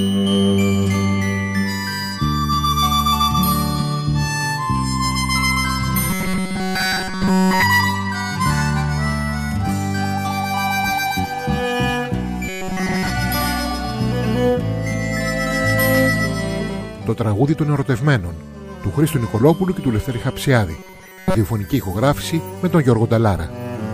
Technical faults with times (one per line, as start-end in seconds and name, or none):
6.10-7.62 robotic sound from repeated short buffers
12.49-13.10 robotic sound from repeated short buffers
20.78-21.35 robotic sound from repeated short buffers